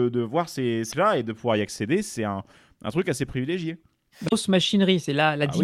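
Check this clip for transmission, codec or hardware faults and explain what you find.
Two bursts of damaged data in a compressed stream, at 0.88–0.93 s and 4.25–4.33 s in the speech. Corrupted bytes make the decoder misread frames and hunt for the next valid header, giving a brief chirp, squawk, click or short hole.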